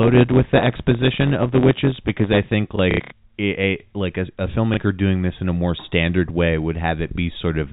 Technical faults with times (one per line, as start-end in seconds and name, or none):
0.00-2.54 block size mismatch (truncated)
2.76-3.12 packet loss with last packet repeated
4.74-4.77 packet loss with last packet repeated